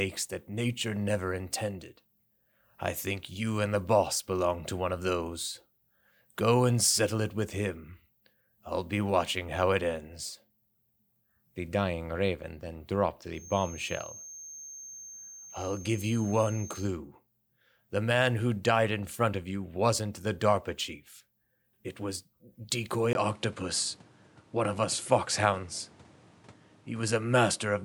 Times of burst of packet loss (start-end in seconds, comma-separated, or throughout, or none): none